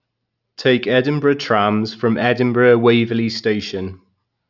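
No technical faults are audible.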